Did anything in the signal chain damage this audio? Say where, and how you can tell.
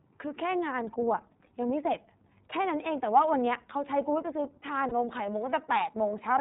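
Yes. At the codec stage, the whole speech clip went through the iLBC codec, with plainly audible damage. Nothing passes above 4 kHz, and the voice sounds slightly rough and synthetic. On a spectrogram there is a hard ceiling at 4 kHz, which fits iLBC's narrowband coding, here in its 13.33 kbps, 30 ms frame mode.

At the network stage, lost iLBC frames leave a 30 ms patch from 4.89 to 4.92 s, which fits one lost frame. The decoder repeated the last pitch cycle blended with noise, so it sounds like a brief held, buzzy vowel. The waveform shows repeated noisy pitch cycles, followed by clean recovery.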